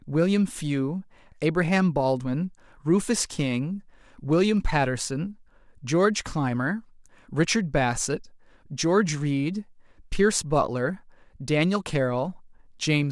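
Nothing here stands out as a technical fault; the speech just runs along without any glitch, dropout or other problem catching the ear.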